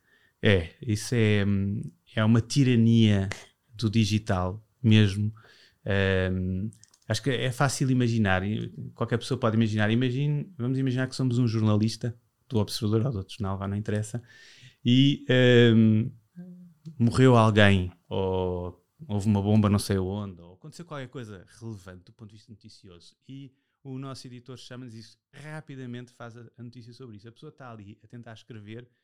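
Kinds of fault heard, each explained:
Zipper noise: from 19.92 to 20.61 s the speech drops by about 20 dB, but the fade is applied as a staircase of level jumps, around a hundred a second, instead of a continuous glide. Every jump puts a tiny step into the waveform, and that step sounds as a click. The clicks come fast enough to merge into a buzzy ticking that rides on the speech only while the level is moving, then stops once the drop is complete.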